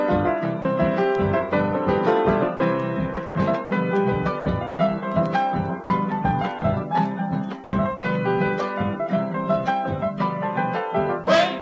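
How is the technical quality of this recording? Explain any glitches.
The recording has a series of short dropouts and choppy stretches where real sound is replaced by a flat, synthetic hiss. The audio also has no content above 8 kHz, which fits a wideband call codec such as G.722.

Sound dropped by the voice detector: At 0.62–0.65, 2.57–2.60, 5.84–5.90 and 6.59–6.62 s, the sound briefly vanishes into steady noise, for about 30 ms each time except at 5.84 s, where the gap is about 60 ms. The likely cause is the sender's voice detector judging those moments to be background, stopping transmission, and the receiver filling the gap with comfort noise until sending resumed.

Sound chopped by the voice detector: From 3.14 to 3.71 s and from 4.40 to 4.79 s, the sound stutters, with about 180 ms in total replaced by noise in each stretch. From 11.24 s to the end, about 51 ms is replaced. This likely happened because the detector toggled between sending and muting several times within each stretch, clipping the quieter edges of the sound.

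Comfort noise in place of the background: Between 7.64 and 7.73 s, the background, sitting about 20 dB below the loud parts, turns smooth and detail-free and drops by about 4 dB. The likely cause is discontinuous transmission: with nothing detected, the sender paused, and the receiver generated roughly matched synthetic noise for those 90 ms instead of the genuine ambience.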